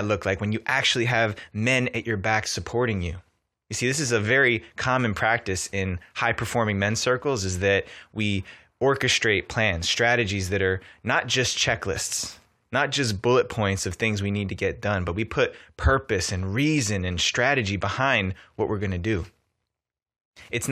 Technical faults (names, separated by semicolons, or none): none